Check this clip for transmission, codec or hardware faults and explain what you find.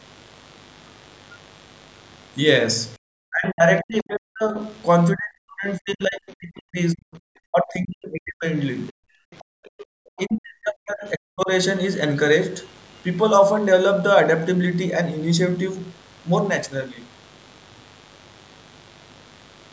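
Four kinds of fault are present in this speech recording, all from the capture side of a call rather than the codec. The band stops at 8 kHz, which is just the call microphone processing and not a fault.

Mains buzz runs throughout, about 30 dB below the speech. Switching spikes from a dimmer, rectifier or poorly shielded line leak in twice per 50 Hz cycle. The result is a raspy, constant buzz. A spectrogram shows evenly spaced horizontal lines at 50 Hz harmonics climbing into the kilohertz range.

Background gated by the echo canceller occurs at 2.98–3.02 s and 9.23–9.89 s. While the far end played over the loudspeaker, the canceller pulled the microphone down by as much as about 40 dB. The room sound briefly vanishes, leaving near-silent notches in the waveform and blank strips in the spectrogram.

Speech suppressed in double talk appears at 3.3–4.57 s, 5.14–8.45 s, 8.91–8.95 s and 10.17–11.49 s, with drops around 40 dB. 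This is likely because both parties spoke at once and the canceller ducked everything. The talker sounds choppy or dulled. The waveform shows collapsed, fragmented envelopes, and the spectrogram thins out in the upper bands.

The other side's voice leaking through appears at 9.32–9.38 s and 9.79–9.85 s, roughly 35 dB and 25 dB below the speech. It is likely loudspeaker echo that escaped cancellation. These are faint scraps of a second voice, visible as weak harmonic traces inside the gated gap.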